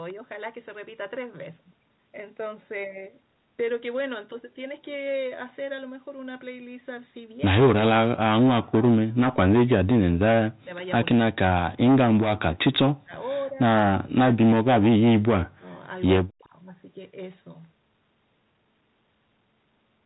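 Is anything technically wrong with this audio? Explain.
Yes. Speech suppressed in double talk at 8.18–10.7, 11.14–11.39, 11.57–13.14, 13.44–13.6, 14.03–15.7 and 16.22–16.54 s, likely from an echo canceller that couldn't separate the talker from loudspeaker echo. The speech dips by up to about 40 dB, only about 10 dB at 13.44 s, and cuts out in pieces.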